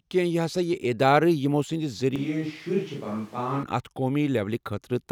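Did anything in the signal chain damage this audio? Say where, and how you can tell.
Yes. A switch to a distant microphone runs from 2.16 s to 3.63 s, at the capture end of the chain. The speech abruptly turns roomy and hollow, loses bass and drops by roughly 5 dB, while background noise rises to about 25 dB below the speech. Both the change and the return are instantaneous. The likely cause is that the close microphone's feed dropped out and the recording fell back on a farther pickup, such as a camera microphone.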